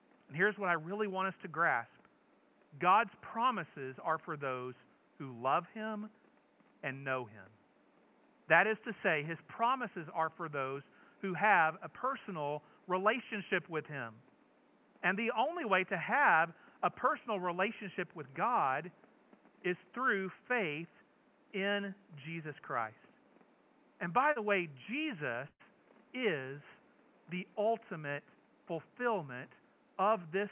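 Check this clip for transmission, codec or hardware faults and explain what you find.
Two packet-loss faults affect this speech, both over a narrowband call path with nothing above 4 kHz, which fits a G.711 A-law link.

Short concealed packet loss, 24.32 to 24.39 s: about 40 ms of packets arrived too late, and the receiver extrapolated 36 ms from the preceding sound, leaving a brief smear or wobble.

Burst of packet loss, 25.48 to 25.62 s: roughly 120 ms went missing in a row. Concealment stretched the last sound for 118 ms, fading it, with 40 ms of silence, before speech resumed further on.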